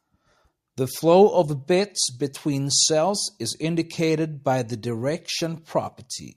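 No technical fault can be heard anywhere in the recording, and the speech signal stays intact and continuous from beginning to end.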